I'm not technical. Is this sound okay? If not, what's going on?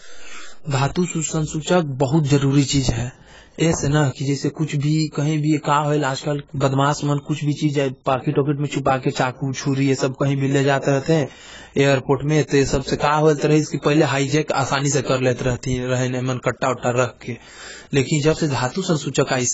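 No. The speech has heavy AAC compression damage from start to finish. Nothing is heard above about 7.7 kHz, so the voice sounds dull and muffled, and hissy sounds like s lose their crispness and take on a smeared, fizzy, warbling edge. The likely cause is saving the recording with the AAC format at a very low data rate, which forces the encoder to discard a large share of the detail.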